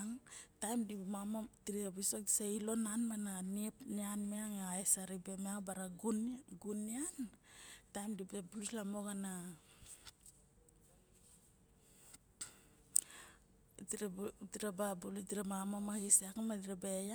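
A recording of speech, with no technical faults to point to. Nothing in it stands out as a problem at any moment.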